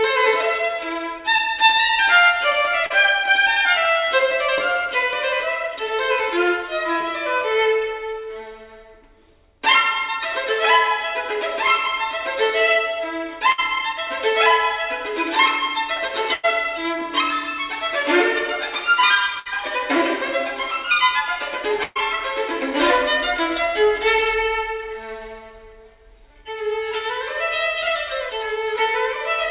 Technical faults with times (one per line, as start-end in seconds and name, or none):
2.86-2.92 short concealed packet loss
13.52-13.60 burst of packet loss
16.34-16.45 burst of packet loss
19.39-19.47 burst of packet loss
21.83-21.97 burst of packet loss